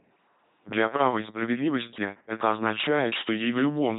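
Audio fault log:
Throughout, LPC-10 vocoder: the speech has passed through a parametric coder that keeps no waveform at all, only a short all-pole model of the vocal tract and a per-frame choice between a pulse train and noise to drive it, which fits the 2.4 kbit/s LPC-10 scheme. Every stretch is forced to be fully voiced or fully unvoiced, so the speech comes out as a heavily damaged, buzzing, mechanical robot voice with nothing above 3.8 kHz.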